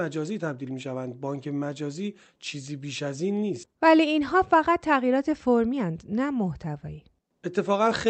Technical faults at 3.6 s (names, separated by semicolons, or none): skip ahead